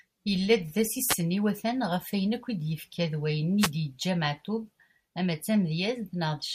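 The radio link from an analogue FM wireless microphone fades twice, as reflected copies of its signal arrive out of step and partly cancel at the receiver. Each time, the receiver's own noise surges up through the speech, heard as a wireless microphone noise hit: a brief swish of static from 1.08 to 1.15 s, then a longer burst from 3.58 to 3.71 s.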